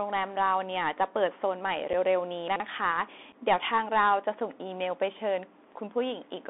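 Bluetooth CVSD headset codec damage runs through the whole speech clip. The sound is confined to a telephone-like band of roughly 250 Hz to 3.6 kHz, and it is plainly degraded. CVSD encodes each sample as a single up-or-down bit with an adaptive step, which fits a 64 kbps headset link. Fast, loud high-frequency movement outruns the step, so sibilants come out scratchy, and a granular hiss sits beneath everything.

Unconcealed Bluetooth headset packet loss first appears at 1.93 s. About 7.5 ms of audio, likely a single headset voice packet, never arrived, and nothing was filled in to cover the gap. The result is a brief hole with hard edges, and the audio returns slightly subdued for a moment as the CVSD step size rebuilds.

Chunks out of order follow from 2.48 to 2.60 s. A 40 ms slice of audio was delivered late and plays two chunks after its proper place, so the sequence is scrambled rather than missing. 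The three abrupt splices produce a jumbled, stuttering instant.

A second unconcealed Bluetooth headset packet loss occurs from 3.32 to 3.34 s. Another 7.5 ms dropout leaves a sharp-edged gap, and the level briefly dips after it.

Chunks out of order return from 5.64 to 5.72 s. This time a 40 ms chunk lands one position late, and the reordered segment gives a short garbled moment.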